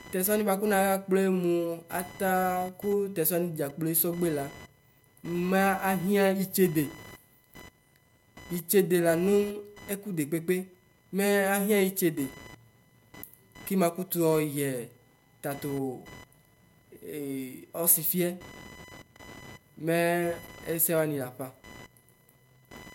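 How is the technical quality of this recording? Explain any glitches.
The recording is marred by computer activity noise. Throughout, a buzzing chirp near 1 kHz, roughly 25 dB below the speech, tracks the computer's activity rather than the talking; spectrograms show intermittent narrow bands.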